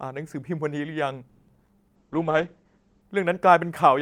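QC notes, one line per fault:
1.29–1.70 s, repeated packet loss (robotic sound): four gaps hit the speech in quick succession. The receiver papers over each one by extending the preceding audio, about 230 ms of concealment in all, and roughly 60 ms simply drops out. The longest hole runs 190 ms, and over half of this stretch is synthetic fill rather than real signal. That leaves the speech choppy and robotic, with fragments missing between the stretched pieces.
1.96–3.09 s, call bitrate drop: the speech turns coarse and muffled as the encoder falls back to a far lower rate. The sound points to a drop from around 48 kbps to roughly 10 kbps. At that rate the codec narrows its audio band, and the top end falls from 20 kHz to 8 kHz, which removes the brightness. Coarser quantisation adds a rough, watery texture. The degraded state lasts about 1.07 s before quality recovers.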